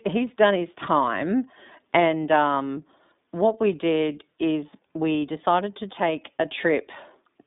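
Throughout the speech, the iLBC codec confines the sound to about 200 Hz to 3.7 kHz, with nothing above 3.8 kHz. Unlike plain band-limiting, it codes each 30 ms frame independently, which fits its 13.33 kbps mode and adds a plainly audible rough, synthetic grain.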